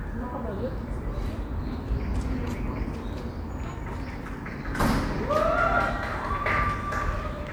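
No technical faults can be heard anywhere in this recording, so there is nothing to place in time order.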